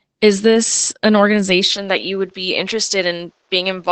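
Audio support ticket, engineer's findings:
Opus voice compression, whole clip: speech muffled and a bit hoarse and robotic, nothing above 8.5 kHz. Sounds like SILK in wideband mode squeezed hard; the damage fits a bitrate around 12 kbps, with the excitation coded coarsely.

From 1.69 s to the end, right after "this an": most likely the input switched to a poorer device. The sound gets duller, with the top end now stopping near 7.6 kHz. Level drops about 5 dB, and a new noise floor appears roughly 45 dB down. The switch is seamless, with no gap.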